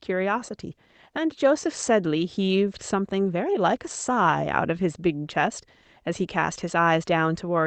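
No technical faults occur anywhere in this speech, so there is nothing to describe in time order.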